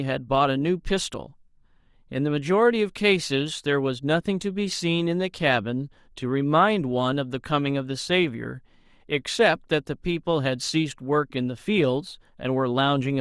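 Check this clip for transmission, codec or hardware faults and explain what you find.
Nothing stood out on listening to this speech recording that would point to a problem in how it was transmitted, encoded or captured.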